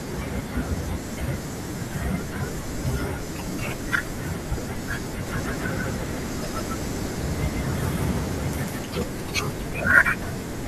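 From about 5.27 s to 8.83 s the speech picks up a doubled audio track: a second, full-band copy trails the original by roughly 150 ms, at about the same level. It isn't an echo. There's no decay and no room colour, just the same speech stacked on itself, so it sounds smeared and stuttery. It cuts in and drops out abruptly at both ends. Likely cause is a slower capture path or an edit holding two copies out of step.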